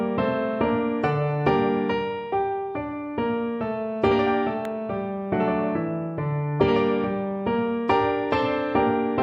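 A single sharp snap lands at 4.65 s, a brief tick sitting on top of the audio and peaking at about -20 dBFS. This is an electrical switching spike, likely from a nearby switch, motor or static discharge throwing a momentary arc that the audio line picked up as interference. Because the disturbance arrived as one very short burst rather than a cluster, it reads as a single click.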